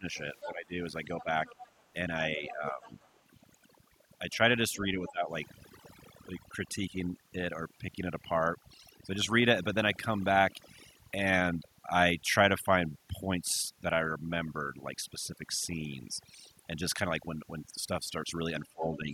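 A speech recording carries overdone noise removal from start to finish: the background is pulled down, leaving twinkling, chirpy specks, and quieter parts of the voice are gated off along with the noise. Unlike a codec fault, the damage tracks the noise floor, worst in pauses and soft syllables. Speech suppressed in double talk shows as dips of roughly 15 dB at 0.0 to 1.28 s, 4.37 to 5.31 s and 18.62 to 19.11 s, and about 10 dB at 2.37 to 2.91 s. The voice drops, dulls or breaks up in pieces, most likely an echo canceller ducking everything while both sides talk. These dips line up with the other side's voice leaking through, which is a faint second voice about 15 dB below the talker from 0.14 to 3.1 s, about 20 dB below at 4.32 to 5.1 s, and louder, about 10 dB below, from 18.66 s to the end. It is likely loudspeaker echo the canceller left in. Because it is a distinct voice rather than a delayed copy of the talker, it is not the talker's own echo.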